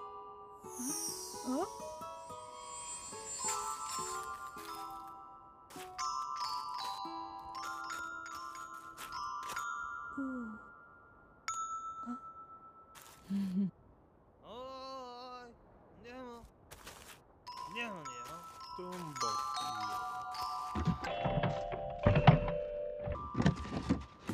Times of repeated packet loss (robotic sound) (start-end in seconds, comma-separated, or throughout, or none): none